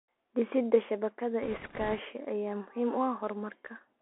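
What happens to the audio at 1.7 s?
At 1.7 s the audio sits inside a burst of bit errors on a Bluetooth voice link, running from 1.43 to 2.00 s. Flipped bits in the delta stream each nudge the waveform only slightly and then decay, so instead of clicks there is a rushing, crackly noise, with an error rate of around a couple of percent. On a spectrogram it shows as a broadband haze filling that half-second; the waveform looks fuzzy rather than spiked.

Underneath, the whole clip carries the Bluetooth CVSD headset codec, a one-bit up/down coder at 64 kHz with an adapting step, giving a 64 kbps link. Speech is held to roughly 300 Hz to 3.4 kHz, with a granular hiss beneath it and scratchy s sounds where loud high content outruns the step. A spectrogram shows a hard ceiling near 3.4 kHz.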